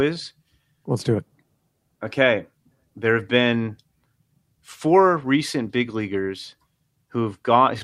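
No technical faults can be heard anywhere in the recording. The speech has no moment that calls for a time or a value to be noted.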